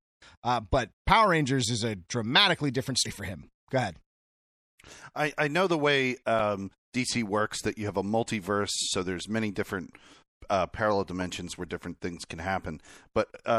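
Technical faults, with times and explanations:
Throughout, MP3 compression: the encoder appears to have been starved of bits, with the character of this speech pointing to something near 64 kbps. It likely discarded the upper treble above a fixed cut-off and dropped weak frequency lines that then flicker on and off between frames, which is why the sibilants turn metallic and chirpy, the speech sounds watery and swirling, and consonant onsets lose their crispness and smear.
3.02 to 3.06 s and 6.36 to 6.40 s, damaged data in a compressed stream: at each point a stretch of the encoded bitstream is corrupt, so the decoder cannot make sense of those frames, loses its alignment and has to hunt forward for the next valid frame header. Each episode lasts roughly 40 ms and comes through as a brief glitch.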